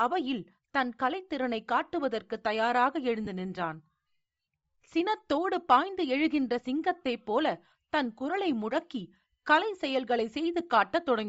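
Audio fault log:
throughout: Bluetooth LC3 compression, likely the cause of the breathy, grainy edge on the speech. Much of the upper band is zeroed and noise-filled, as fits LC3 at around 32 kbps. On a spectrogram the top band looks speckled and diffuse rather than carrying sharp harmonic detail.
3.25 to 3.27 s and 7.05 s: lost LE Audio frames. The decoder repeated the last spectrum with scrambled phase, so each gap turns to a short noisy smear. The first gap lasts about 22.5 ms, fitting three 7.5 ms frames; the second, one frame. A spectrogram shows brief blurred columns where harmonics vanish.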